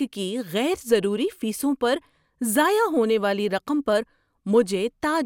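Nothing stood out on listening to this speech recording.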